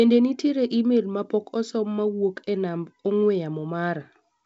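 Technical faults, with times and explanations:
No technical faults are present in the speech. The G.722 wideband telephone coding at 56 kbit/s leaves only light coding traces, with nothing in the audio above about 7.8 kHz.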